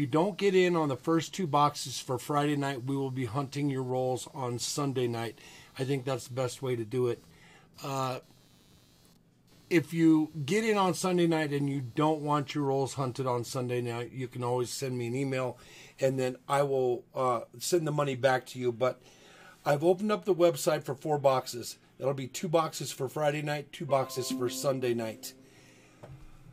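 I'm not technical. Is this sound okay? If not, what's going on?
No. From the start to about 13.2 s there is a faint, rapid buzzing underneath the sound, a quick pulsing at roughly two hundred pulses a second, sitting quietly well below the main audio. This is computer activity noise. When the computer's processor, graphics card or mouse suddenly works harder, its power draw shifts the electrical ground that the audio circuit shares, and that shift leaks into the recording as buzz tied to the computer's workload rather than to the sound itself.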